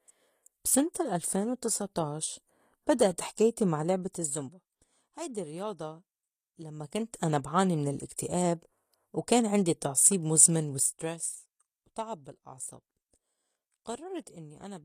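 Throughout, the treble is plainly damaged and stops at 15 kHz. This is likely HE-AAC compression, near 24 kbps, rebuilding highs from copied lower bands.

Zipper noise runs from 3.76 to 4.82 s, after "وتسع طاعش بدأت حكايتي". The level drops about 15 dB in roughly fifty unsmoothed steps per second, each ticking. It recurs from 6.70 to 7.19 s, before "أنا بعاني من الاكتئاب", rising about 15 dB in 1 dB steps.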